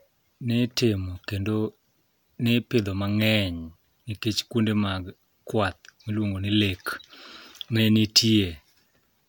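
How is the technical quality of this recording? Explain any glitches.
No glitches can be heard anywhere in this recording.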